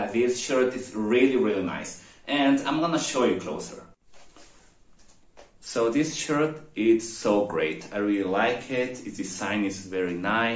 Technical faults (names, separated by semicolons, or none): none